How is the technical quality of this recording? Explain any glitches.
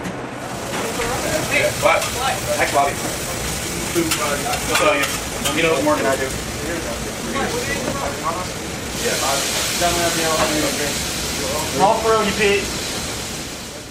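The opening stretch has one clear problem: a time-stretched section running from 0.0 to about 8.96 s. Over that span the audio moves along at roughly 1.35 times its natural pace while the pitch stays put, so it comes across hurried, then settles abruptly into normal pace. That's likely software squeezing the passage to fit a shorter slot, keeping pitch steady by dropping tiny slices of the waveform, and those cuts give it that rushed texture.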